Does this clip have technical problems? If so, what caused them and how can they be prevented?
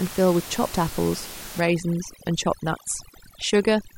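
Yes. From 1.6 s to the end, the background drops into twinkling gaps: overdone noise removal muting bands near its noise estimate. Prevent it by setting reduction gentler, since room noise sits only about 15 dB below speech.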